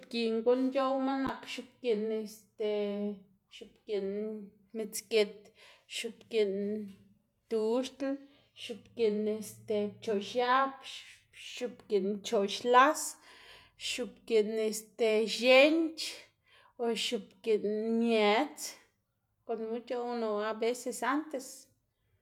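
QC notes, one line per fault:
No faults detected.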